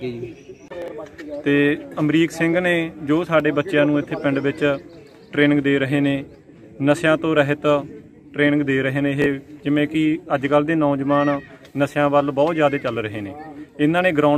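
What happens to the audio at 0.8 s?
From 0.82 to 0.88 s, chunks out of order: a 20 ms chunk plays two chunks late, a brief jumble with three hard waveform joins.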